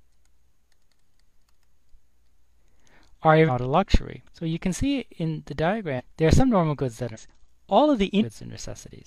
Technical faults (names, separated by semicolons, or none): compressed frames skipped